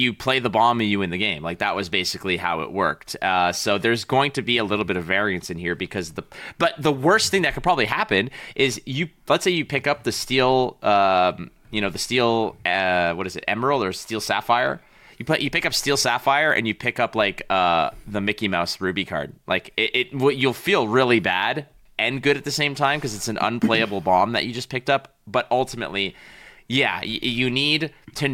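No technical faults can be heard anywhere in the speech recording. Nothing in the audio calls for a time stamp or a cause.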